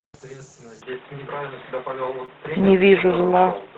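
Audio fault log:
0.82–3.77 s, input switched to a poorer device: sound abruptly turns dull and boxy, a level shift of roughly 5 dB and new background noise, likely a change of microphone.
2.25–2.29 s, short stall from a late packet: the sound is held about 24 ms too long while the buffer waits, then carries on with nothing lost.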